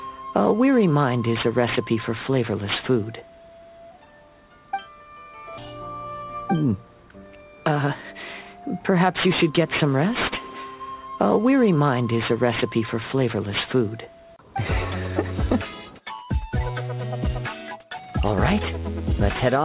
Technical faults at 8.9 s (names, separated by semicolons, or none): aliasing